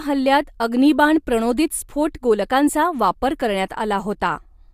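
Nothing in this recording stands out as a technical fault, so there's really nothing to flag here.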